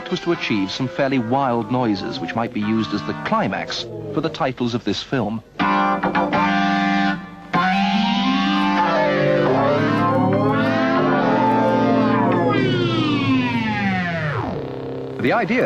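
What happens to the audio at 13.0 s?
At 13.0 s the sound is inside a Bluetooth SBC bit pool drop, running from about 11.96 s to 13.32 s. The link got congested, so the sender cut the bits per frame to keep the stream alive. The dulling fits a fall from a bit pool of 31 to 15, near 105 kbps. The highest sub-bands are starved and the rest are quantised coarsely. The treble goes dull and a gritty noise rises, then clears after 13.32 s.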